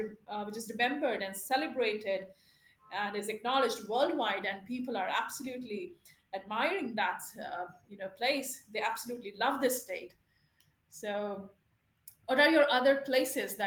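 No technical faults can be heard in this speech, which carries the full-band sound of Opus voice compression at 24 kbps in hybrid mode with 20 ms frames, with only light coding damage.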